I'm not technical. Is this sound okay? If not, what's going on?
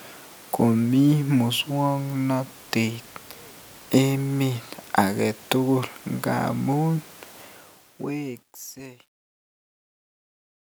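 No. From 7.42 s the fading speech turns gritty, and from about 8.3 s to the end it is at its worst. This is truncation distortion on a fade: the volume stage keeps too little detail, so the quiet tail of the fade-out becomes crude steps.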